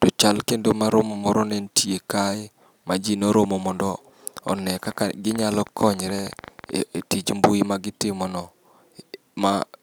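From 4.48 s to 6.70 s, just after "ma ji noromo mondo", a train of clicks sits on top of the speech: around thirty near-identical sharp pulses at roughly 10.9 per second, spaced unevenly and peaking a few decibels above the speech. The likely cause is electrical interference or a struggling interface injecting pulses. Unlike random crackle, each tick has the same shape, and unlike a single dropout click, they keep coming, audible even in pauses.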